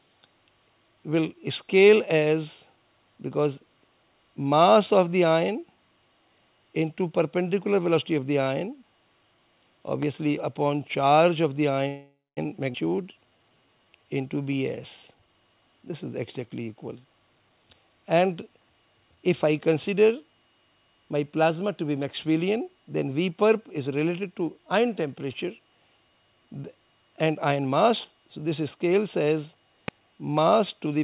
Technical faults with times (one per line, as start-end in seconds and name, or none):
10.02-10.05 loud pop
11.88-12.39 call audio freeze
12.73-12.76 skip ahead
12.88-14.05 jitter buffer slow-down
15.07-17.80 jitter buffer speed-up
29.88-29.91 loud pop